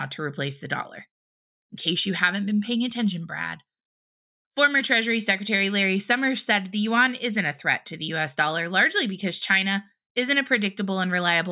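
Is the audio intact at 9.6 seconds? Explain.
Yes, at 9.6 seconds the speech plays through intact, with no audible dropout, click, distortion or other fault at that moment.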